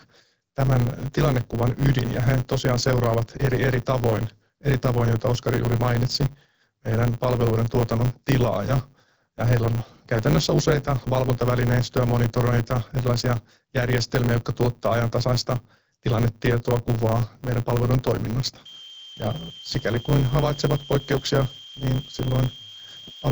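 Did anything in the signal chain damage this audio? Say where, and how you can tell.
Yes. Throughout the clip there is a block size mismatch (truncated) at the driver or buffer stage. A steady 100 Hz buzz sits under the speech, and everything runs about 1.16 times fast while the timbre stays natural. That points to one stage writing blocks of around 512 samples and the next reading only about 441, with each block's tail discarded. A sample-rate error would raise the pitch along with the speed. Here the timbre holds, and the buzz marks the block rate.

From 18.65 s, just after "meidän palvelujen toiminnasta", to the end, a switching supply whistle appears in the analogue wiring or power. It is a thin tone near 3 kHz, wandering between 3.12 and 3.24 kHz, about 20 dB below the speech. Codec artefacts would follow the speech, but this tone holds steady through pauses and drifts with load, which is the behaviour of a converter in burst mode or two supplies beating.

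From 21.12 to 21.23 s, AMR bit errors on the network link make the speech hoarse and gargly for roughly a tenth of a second. The span fits about six damaged frames. Pitch and loudness roughly hold, so the frames weren't lost or concealed. Instead, flipped low-protection bits misplaced the excitation pulses and skewed the finer parameters. This is distinct from the clean AMR-WB coding elsewhere, which is consistent with a 12.65 kbit/s mode.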